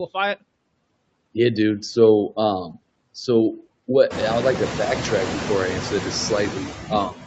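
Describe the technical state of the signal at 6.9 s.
At 6.9 s the noise suppressor misjudges part of the speech as background and pulls it down with the noise, so from 6.82 to 6.91 s the speech is cut by the noise suppressor by up to about 11 dB. That brief stretch of roughly a tenth of a second sounds swallowed and faint.

Noise suppressor artifacts also run through this moment and the whole clip. The suppressor lowers the bands it treats as steady noise by about 21 dB frame by frame, working against room noise that climbed about 20 dB near 4 s. The remaining noise sinks between the words and rises under them.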